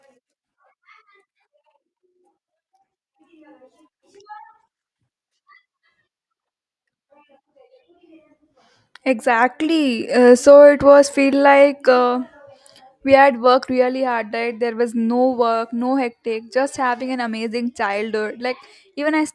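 Nothing stood out as a fault at any point on listening to this speech recording.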